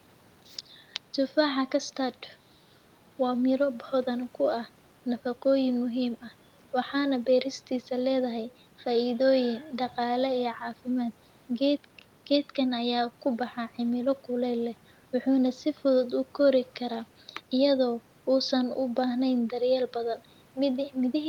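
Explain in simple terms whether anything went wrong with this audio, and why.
Nothing went wrong with this audio, because no technical fault can be heard anywhere in the speech.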